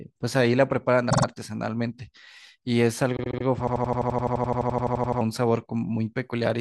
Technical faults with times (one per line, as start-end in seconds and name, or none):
1.09-1.24 repeated frames
3.16-3.44 repeated frames
3.67-5.21 system hang loop